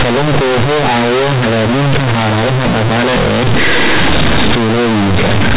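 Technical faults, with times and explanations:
Throughout: companded audio read as linear. Mu-law bytes play as plain 8-bit linear samples without expansion, so each sign change swings across about half the range and quiet moments equal loud ones: buzzy distortion, loud noise in pauses. The waveform is bent out of shape, and spectrogram gaps fill with broadband energy.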